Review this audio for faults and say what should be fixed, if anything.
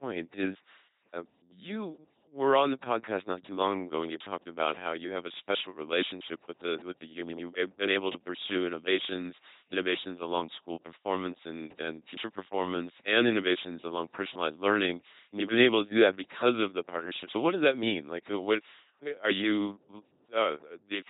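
Throughout the speech, the voice is a buzzing, mechanical robot timbre with stray buzz or hiss where sounds are misjudged, and nothing above 3.9 kHz. That fits an LPC-10 vocoder at 2.4 kbit/s, which drives a ten-pole filter with either pulses or noise. Record or transmit with a higher-rate waveform codec instead of LPC-10.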